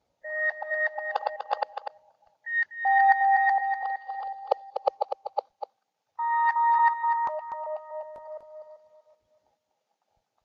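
A recording of sounds carries a doubled audio track throughout. A dry, full-band copy trails each sound by roughly a third of a second, about 10 dB quieter. A second, slower capture path is the likely cause.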